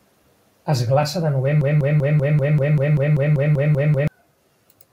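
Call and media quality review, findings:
Broken-record loop, 1.61–4.08 s, starting right after "glaça de": a roughly 0.19 s fragment of the speech repeats back to back about 13 times. Likely a stalled player or stream re-sending its last buffered piece; the speech due in that span is lost.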